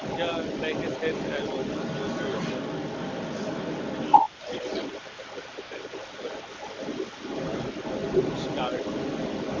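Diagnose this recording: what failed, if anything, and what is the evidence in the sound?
A second voice runs underneath the talker for the whole clip, from 0 to 9.6 s, at about the same level as the main speech, so the two compete rather than one sitting clearly behind the other. This is the other side's voice leaking through, and the stage is call processing. The likely cause is that the far end, played on the talker's loudspeaker, reached the microphone and the echo canceller failed to subtract it before encoding.

The talker's level sinks briefly at 4.35 to 4.45 s, by about 10 dB, and again at 5.26 to 5.43 s, more gently, by about 5 dB. Both dips last only about a tenth of a second. These match speech suppressed in double talk, again in call processing. With both sides talking at once, the canceller likely could not separate near speech from loudspeaker echo and attenuated the whole microphone signal.

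Just after that, the real background is swapped for a smooth, even hiss at about 5.56 s for a single 20 ms frame, then from 5.61 to 5.71 s for 100 ms, switching in and out at each edge. That is AMR comfort noise at the codec stage. The encoder treated those instants as silence and stopped sending speech frames, and the receiver synthesised noise from a coarse level-and-spectrum description to fill the gaps.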